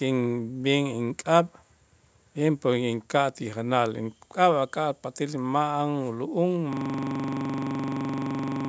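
System hang loop from 6.73 s to the end: the speech freezes into one 42.67 ms slice, consistent with a 2048-sample buffer, repeating 46 times as a 23.4 Hz stuttering buzz.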